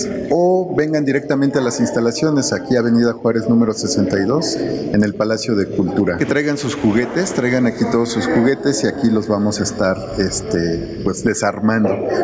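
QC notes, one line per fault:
Throughout: gain pumping. The level is pulled down hard on each loud sound and rises again in the gaps, with a swing of around 15 dB, so the audio breathes in step with its own loudness. Loud and soft passages sit closer together than they should, giving a squashed sound. This is likely an input gain set far too high for the microphone, with a fast limiter or compressor clamping it back down on every peak. The bandwidth extends to 8 kHz, and the call microphone processing takes out the lowest bass, which is normal.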